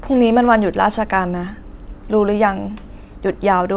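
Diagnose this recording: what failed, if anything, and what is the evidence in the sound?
Nothing failed; the call band stops at 4 kHz.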